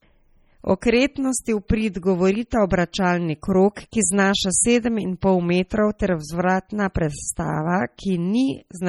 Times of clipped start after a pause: none

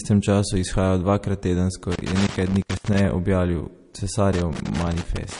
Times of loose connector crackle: 1.92-3.05, 4.33-5.39

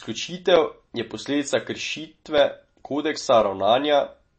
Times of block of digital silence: 0.56, 2.38, 3.41

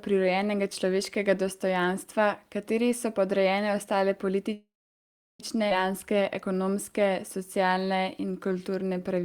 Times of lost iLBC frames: none

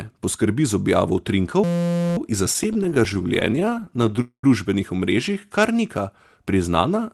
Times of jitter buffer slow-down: 5.29-5.72

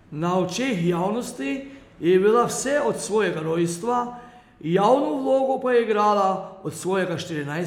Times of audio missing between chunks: none

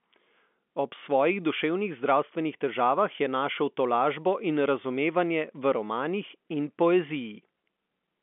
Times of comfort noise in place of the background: none

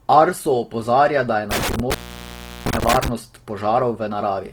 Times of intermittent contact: 1.51-3.08

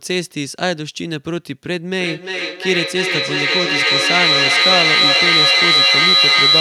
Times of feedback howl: 1.99-6.60

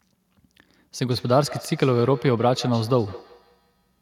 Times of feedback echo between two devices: 1.11-4.01

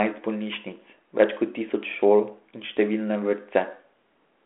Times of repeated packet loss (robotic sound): none

